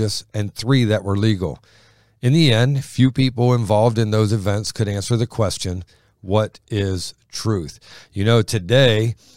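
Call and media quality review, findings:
Block of digital silence at 4.67 s, between "people involved in those" and "could answer the question": single tick, hard cut to silence and back. About 2.7 ms hole, which fits a 128-sample buffer left unfilled. Probable cause is audio-callback underrun in the playback or processing path.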